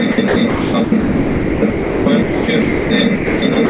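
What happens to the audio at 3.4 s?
Sound chopped by the voice detector runs from 3.16 s to the end at 3.70 s. The sender likely switched transmission on and off, so about 320 ms of quieter sound became synthetic comfort noise.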